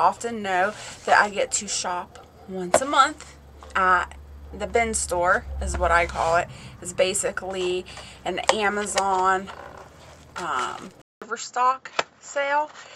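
At 11.02 s the sound breaks off for about 200 ms, then returns duller and a few decibels quieter, with nothing above 7.6 kHz and a faint new background hiss, and it stays that way to the end. The likely cause is the input switched to a poorer device. Unlike a plain filter or gain change, the band, level and noise floor all shift together at once, right after a short gap.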